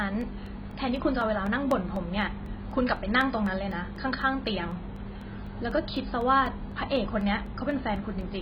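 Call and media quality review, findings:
Dull, smeared speech throughout, with fizzy, warbling sibilants. Nothing above about 5.1 kHz. Likely AAC compression, AAC-LC at a low rate; the damage points to roughly 16 kbps. Encoder drops high bands and coarsely quantises the rest to fit the budget. Heavy codec damage.

Regular ticks from 0.21 s to 8.21 s, one every 0.25 s. About thirty in total. Periodic USB or driver dropouts. A background task stalls the bus or driver on a fixed cycle. Roughly 1 ms of audio replaced by silence each time. Audible against the speech as a steady click train.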